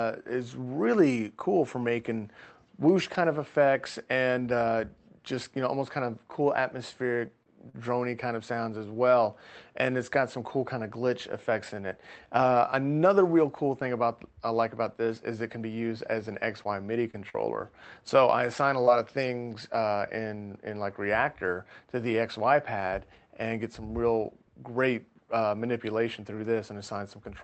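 Short concealed packet loss occurs three times in quick succession, at 7.27–7.31 s, 7.43–7.47 s and 7.69–7.75 s. About 20, 20 and then 40 ms of audio failed to arrive in time, and the receiver bridged each hole by extending the preceding sound before easing back into real signal, leaving brief smeared ticks.

Scattered short gaps run from 15.99 to 19.11 s. Roughly four separate losses, the longest around 40 ms and totalling about a tenth of a second, were each patched by continuing the last sound. They appear as isolated hiccups covering only a few percent of that stretch. Throughout, the call-codec path audibly stops near 8 kHz, which fits Opus at a modest bitrate such as 32 kbps.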